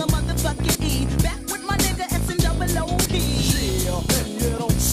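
At 0.75 to 0.78 s, a short blip cuts through the sound. It returns at 3.06 to 3.09 s. Both come from damaged data in a compressed stream. Corrupted bytes throw the decoder out of sync. It mangles those frames, then hunts for the next valid header.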